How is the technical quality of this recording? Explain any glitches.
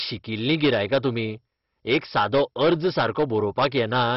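The technical quality is poor. Two faults run through the whole recording, and both damage the speech throughout.

Hard clipping is present from start to finish. The signal was driven about 11 dB beyond what a stage in the chain could pass, so the tops of the waveform were sliced flat. Only a few percent of the samples hit that ceiling, but they are the loudest ones. The squared-off peaks add harmonics high up the spectrum, and every strong syllable carries a harsh, crackling fuzz.

MP2 compression also affects the entire clip. Nothing is heard above about 5.6 kHz, and the audio has a dull, gurgling, granular texture. That points to MPEG Layer II coding at a very low rate, likely around 32 kbps. At that rate the encoder runs short of bits for its sub-bands. It shuts off the upper ones completely and quantises the rest coarsely, so the bands that remain warble and smear.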